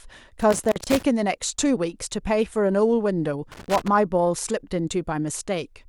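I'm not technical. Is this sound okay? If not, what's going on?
No. Loose connector crackle appears from 0.40 to 1.03 s and again from 3.52 to 3.88 s. It sounds like bursts of scratchy crackling over the speech. A plug or socket somewhere in the cable chain isn't making steady contact. When it shifts, the connection flickers on and off many times a second, chopping the sound into fragments. Reseating or cleaning the connector, or replacing a worn cable, is the usual fix.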